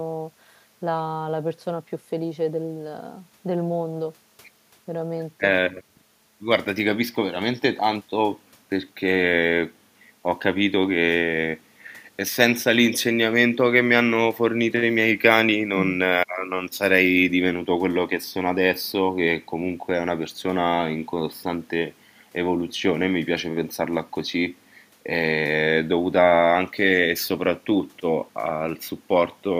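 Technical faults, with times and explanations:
No technical faults can be heard anywhere in this speech recording. Nothing in it calls for a time or an explanation.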